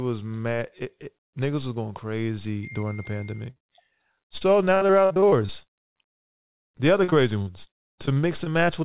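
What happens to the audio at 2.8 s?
At 2.8 s the speech plays through intact, with only the narrowband character of the call path, which fits G.711 mu-law coding with nothing above about 4 kHz.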